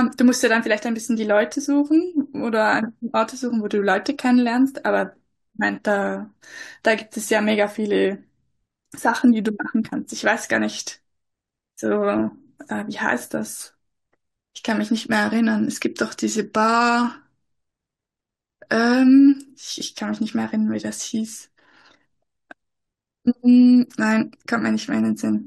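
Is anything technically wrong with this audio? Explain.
Yes. At 12.28 to 12.30 s, compressed frames were skipped: the decoder dropped what sounds like a single frame, which fits a 21.3 ms frame length. The speech jumps ahead by about 20 ms.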